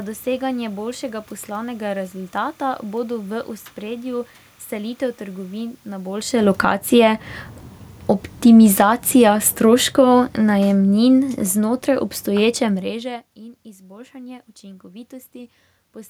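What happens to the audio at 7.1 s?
Around 7.1 s the automatic gain control is rising: from 6.84 to 7.43 s the level climbs by about 7 dB as the gain stage, having judged the input too quiet, turns itself up. What marks it as gain rather than the talker moving, as happens roughly at 6 s, is that the room noise swells along with the voice, because the whole signal is being amplified, not just the speech reaching the microphone.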